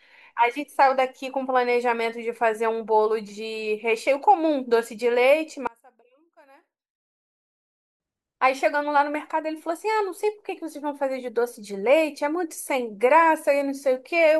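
One channel inverted, from 5.67 to 8.0 s, is the likely cause of the sudden collapse in this speech clip, where the level drops by about 29 dB. With one side of the stereo pair flipped in polarity, the centred speech present equally in both channels cancels when they are summed to mono. What survives is only their small difference, a faint residue, until the full sound returns at 8.0 s.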